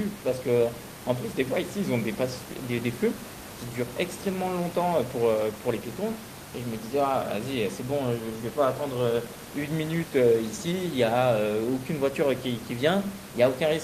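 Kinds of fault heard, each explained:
No technical faults are heard in this recording.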